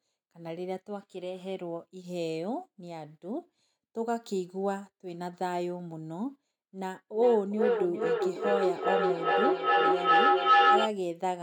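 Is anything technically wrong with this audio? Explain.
Yes. From 6.81 to 10.97 s the speech keeps returning roughly every 0.4 s, building to about 8 dB above itself. This is feedback echo between two devices, each re-capturing the other's playback.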